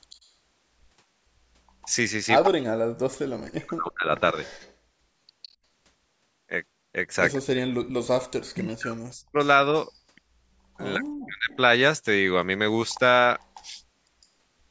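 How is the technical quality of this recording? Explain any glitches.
The recording is a speech call with two recurring problems: a returning echo and repeated drops in the talker's level when both ends speak at once. The audio is band-limited, with nothing above 8 kHz.

Echo leak appears at 0.10–0.29 s, 1.82–2.48 s, 4.43–5.48 s, 7.33–9.92 s and 11.51–14.26 s. A delayed copy of the voice trails it by 157 ms, likely because a far-end loudspeaker's echo canceller let residue through. It ranges from barely audible to nearly as loud as the speech near 2 s. On a spectrogram it shows as ghosted harmonics offset slightly later in time.

Speech suppressed in double talk occurs at 2.46–4.09 s, 7.37–9.38 s and 10.97–11.50 s. The talker's voice dips, thins and cuts out in pieces, sometimes by around 40 dB. The echo canceller likely confused the talker with the echo while the other side spoke. The waveform shows sudden notches, and the spectrogram shows gaps.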